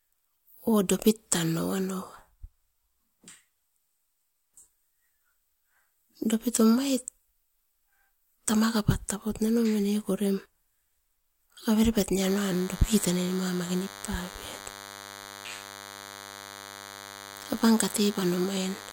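DECT cordless phone buzz from 12.22 s, after "avere pat", to the end: 10 ms radio bursts, rectified in the audio circuit, produce a thin 100 Hz buzz roughly 15 dB under the speech.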